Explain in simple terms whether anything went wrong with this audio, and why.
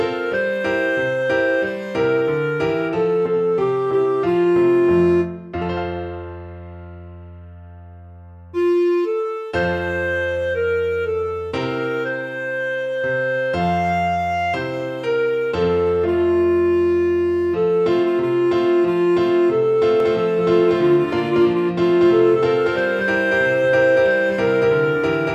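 From 20.0 seconds to the end, everything is heard twice: a second, equally loud copy trails the first by about a fifth of a second, starting abruptly. This doubled audio track is likely caused by the sound being captured again through a slower path.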